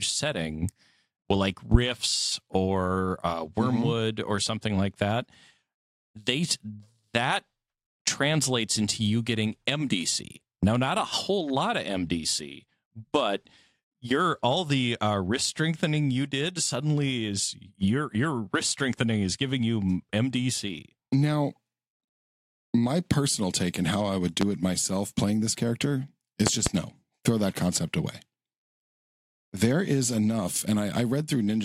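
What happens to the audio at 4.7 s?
Nothing goes wrong at 4.7 s; the speech there plays through intact, with no dropout, click, distortion or glitch.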